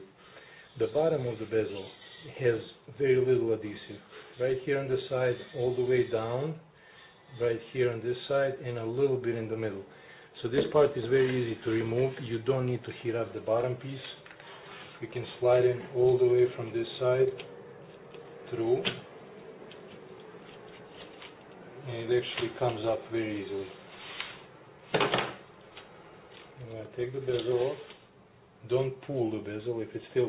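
No technical faults are audible.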